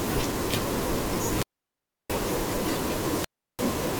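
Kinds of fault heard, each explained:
Wireless microphone squelch dropout: the RF signal from an analogue FM transmitter weakens until the receiver's squelch gate judges the carrier too poor and shuts off the output. In this speech clip it happens twice, from 1.18 to 2.28 s and from 3.04 to 3.72 s. Each time static swells briefly, then the audio drops to near silence, for about 0.67 s in the first event and about 0.34 s in the second, before the signal returns.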